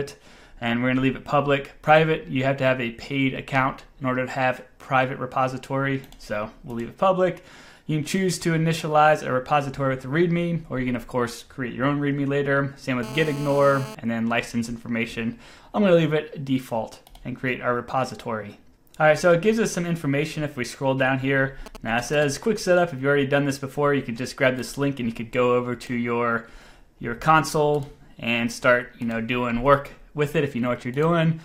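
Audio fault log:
13.03–13.95 s, GSM phone buzz: a hard, raspy 217 Hz buzz with many harmonics, about 14 dB below the signal, lasting 0.92 s. A nearby 2G phone in a call transmits steady bursts about 217 times a second, which the audio circuitry rectifies into this unrelated tone.
21.66–22.24 s, GSM signalling bursts: a galloping dit-dit-dit of short 217 Hz buzzes, roughly 15 dB below the signal, lasting 0.58 s. A nearby 2G phone sends only brief clusters of radio bursts while signalling, and the audio circuitry rectifies them into this broken pattern.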